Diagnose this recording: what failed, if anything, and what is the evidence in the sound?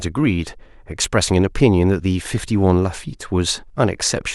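Overlap between stream segments during playback: the player trimmed supposedly duplicated audio at a one-second segment boundary, so the speech skips at 1.04 s.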